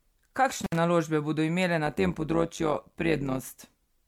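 Throughout the speech there is a swirly, smeared, hollow quality. Consonant attacks sound blurred rather than crisp. The smearing is heavier than a single MP3 pass near 96 kbit/s would cause. The likely cause is generation loss: the audio was decoded and re-encoded roughly four times. Each pass quantised on a shifted frame grid, so the noise and spectral holes built up.

From 0.63 to 0.76 s there is an intermittent contact fault. A loose connection opens the line briefly. The speech drops out for about 60 ms. Crackle marks both edges of the gap. Faint hiss remains while the line is open. The result is a sharp, scratchy break rather than a clean silence.

From 1.86 to 3.41 s there is overlap-add ripple. The audio was split into windowed frames and summed back with an overlap that does not give constant gain. The level therefore swells and dips once per frame, by about 11 dB, at around 100 Hz. 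That is too fast to hear as separate pulses. It comes across as a metallic buzz with extra tones around each note, laid over the speech.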